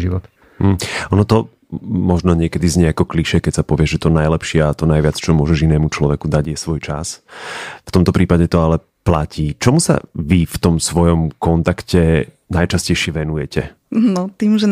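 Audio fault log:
6.45–7.29 s and 13.05–13.56 s, one channel drops out: the speech steps down by about 6 dB at once and recovers just as sharply, with no fade either way. This is likely one stereo side going silent before the mono sum, not a gain dip.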